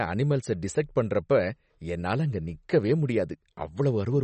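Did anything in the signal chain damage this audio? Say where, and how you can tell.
Yes. The damage sits at the codec stage and runs through the whole speech clip: nothing is present above 8.4 kHz, and the remaining band has a watery, swirling texture with metallic chirps on sibilants and smeared consonant attacks. This is likely MP3 compression at a starved bitrate, consistent with roughly 37 kbps. Short of bits, the encoder applied a fixed treble cut-off and zeroed weak spectral lines that flicker on and off between frames.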